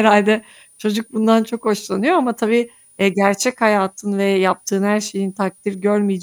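The clip is speech with a switching supply whistle running for its whole length: a thin high tone near 10 kHz, well below the speech. Its pitch wanders between roughly 9.45 and 9.71 kHz instead of holding steady. That drift is typical of a switch-mode power supply running in an audible burst mode, or beating against another supply, with its frequency shifting as the load changes and leaking into the recording chain.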